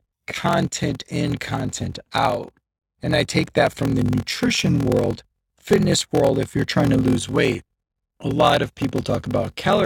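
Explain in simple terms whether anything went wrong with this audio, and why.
Throughout, a block size mismatch (padded) inserts a short gap into every block, producing a 43.1 Hz buzz and slowing the speech to 0.861 speed.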